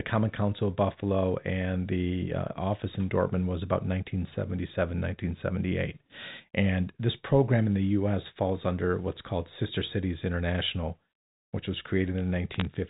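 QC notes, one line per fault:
12.54–12.65 s, bit errors on a digital phone line: a short burst of sharp ticks and crackle near the end of the clip, from a small fraction of flipped bits in the G.711 telephone stream corrupting single samples, unlike dropouts, which remove sound.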